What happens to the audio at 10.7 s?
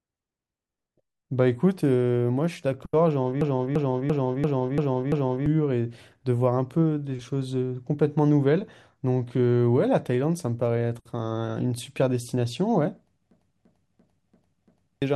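At 10.7 s the speech carries on intact, with no dropout, glitch or other fault at that moment.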